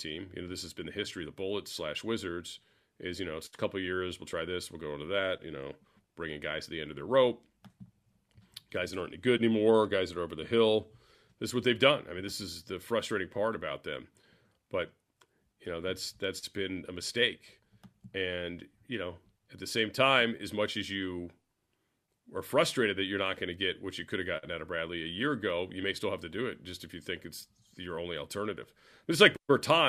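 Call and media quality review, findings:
Crude rate conversion, 0.0–19.91 s, clearing just before "time as much as". Gritty inharmonic fizz tracking loud, bright speech, around 40 dB down. The resampler interpolates linearly without filtering, consistent with 48 kHz to 44.1 kHz. Spectrogram: faint aliased lines running against the harmonics.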